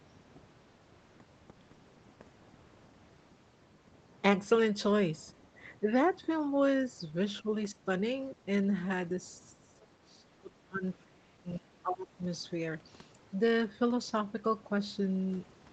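An echo canceller likely mistook the talker for loudspeaker echo, so speech is suppressed in double talk: brief dips of about 10 dB at 5.8 and 7.42 s and about 15 dB at 7.7 s, then cuts of about 25 dB from 9.53 to 10.84 s and 11.04 to 12.23 s.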